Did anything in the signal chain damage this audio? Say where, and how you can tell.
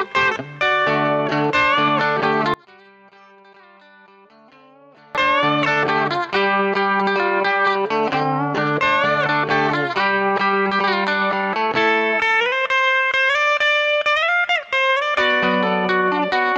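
Yes. From 2.54 to 5.15 s the sound collapses by about 29 dB into a faint residue, then returns at full level. The likely cause is one channel inverted, probably a polarity swap in the analogue wiring of one leg. When the channels are summed to mono, everything common to both cancels. This is not a dropout, because a faint difference signal remains instead of silence, and it is not a gain drop, because only the mismatch between the channels is left rather than a quieter copy of the whole sound.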